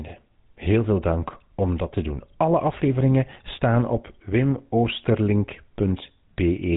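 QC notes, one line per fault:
Throughout, GSM full-rate codec: the speech has a plainly audible buzzy, gravelly roughness and nothing above 3.8 kHz. The codec models the vocal tract as a filter and drives it with a regular pulse train that keeps only one excitation sample in three, so the fine structure of the voice is rebuilt coarsely and grates. The damage fits the 13 kbps full-rate mode, and the top band is simply gone.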